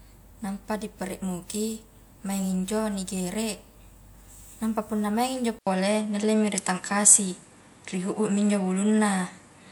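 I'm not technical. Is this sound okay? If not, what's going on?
No. From 5.59 s, just after "nampa punna maingi injo", a brief gap of about 80 ms is followed by duller speech with nothing above 11.4 kHz, a slight level shift and faint new background noise. This is likely an input switched to a poorer device.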